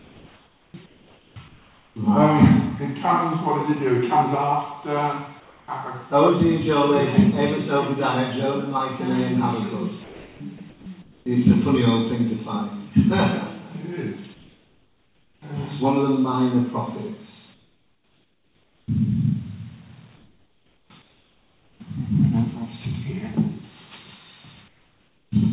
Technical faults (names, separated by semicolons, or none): comfort noise in place of the background; onset clipped by the voice detector; sound chopped by the voice detector